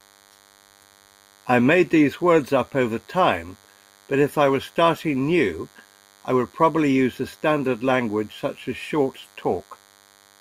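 A speech recording carries DECT cordless phone buzz for its whole length. It is a steady, thin buzz at 100 Hz, rich in harmonics. The buzz sits around 35 dB below the speech. A DECT handset or base station was probably close to the recording chain. It sends a short radio burst every 10 ms. The audio circuitry rectified those bursts into the 100 Hz buzz.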